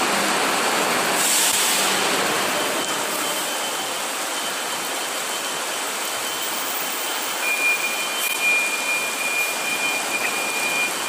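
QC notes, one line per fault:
1.51–1.55 s, corrupt frame decoded: a sharp, loud blip peaking near -5 dBFS, from a single damaged compressed frame played as if it were valid.
8.28–8.36 s, corrupt frame decoded: a longer squeaky burst, peaking around -10 dBFS, across about three bad frames. Misread gains and codes put energy at the wrong frequencies.
10.23 s, corrupt frame decoded: a faint tick, around -20 dBFS. The flipped bits produced only a brief spurious output.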